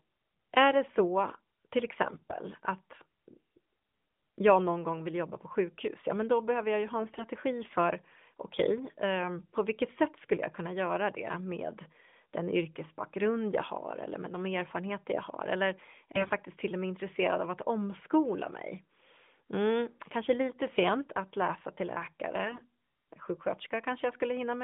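AMR bit errors, unprotected frame bits flipped on a weak link, hit this narrowband speech at 2.04–2.36, 7.00–7.24, 16.12–16.32 and 22.44–22.66 s, turning it briefly hoarse and gargly, worst at 16.1 s.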